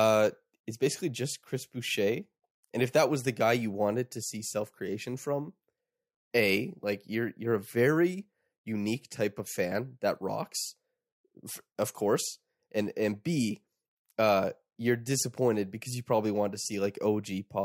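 Crude rate conversion runs throughout. Unfiltered repeated samples fit a 32 kHz to 48 kHz step. An inharmonic fizz, about 20 dB down, trails loud speech.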